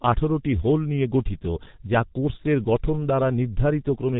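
G.723.1 codec damage runs throughout the speech: nothing passes above 3.8 kHz, and slow, coarse frame coding consistent with about 6 kbit/s leaves the speech muffled, hoarse and smeared.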